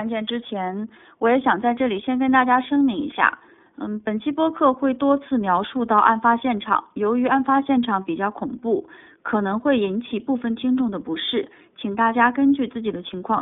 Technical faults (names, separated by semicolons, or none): iLBC codec